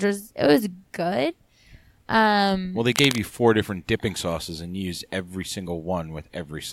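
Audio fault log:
2.92–3.18 s, cable scratch noise: just after "well they", a dense, irregular burst of scratchy rustle sits over the speech for about a quarter of a second, fairly strong at roughly 5 dB below the speech, and clears by "you four different dipping". The ragged, crackling texture points to a worn cable, connector or control being moved, likely, so that its contact resistance jumped rapidly and fed uneven bursts of noise into the signal path.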